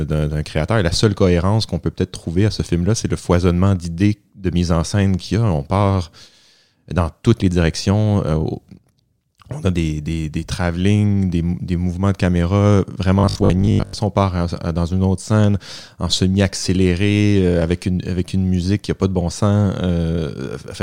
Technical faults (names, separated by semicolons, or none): robotic sound from repeated short buffers